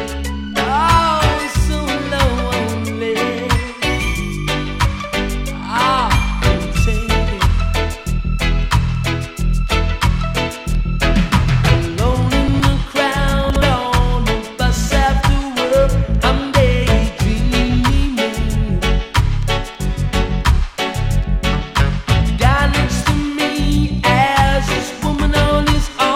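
At 12.48 s and again at 13.5 s, chunks out of order: two 60 ms chunks play swapped, giving a brief jumbled stutter but no missing audio, unlike a dropout.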